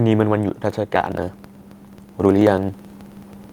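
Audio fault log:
0.96–3.52 s, periodic USB or driver dropouts: from 0.96 s to the end of the speech, a brief stretch of audio vanishes every 54 ms, roughly 18 times per second. The missing samples are skipped rather than padded with silence, so the waveform jumps ahead at each loss and leaves a sharp discontinuity. That regular stream of ticks points to a background task stalling the bus or audio driver on a fixed schedule. The ticks can be heard only where there is signal.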